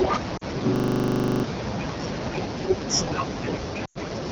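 Throughout, the speech passes through the AMR wideband (HD Voice) codec at a low rate, which fits the 8.85 kbit/s mode, so it sounds rough and raspy. From 0.37 to 0.44 s, lost AMR speech frames make the decoder stretch its last good settings for 40 ms, a brief warbling dip. From 0.76 to 1.44 s, a system hang loop freezes playback on a 40 ms buffer that repeats about 17 times, a stuttering 25 Hz buzz replacing about 0.7 s of audio. From 3.85 to 3.98 s, a longer run of lost frames covers 100 ms, which fits five 20 ms frames, and the sound smears, fades quickly and returns weak.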